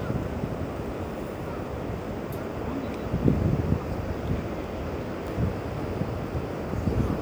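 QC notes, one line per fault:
5.28 s, audio missing between chunks: the sound skips forward abruptly, with roughly a tenth of a second gone and the two sides butted together without any silence. This points to a capture or processing stage working in 3-second chunks, likely dropping audio at the handover between blocks.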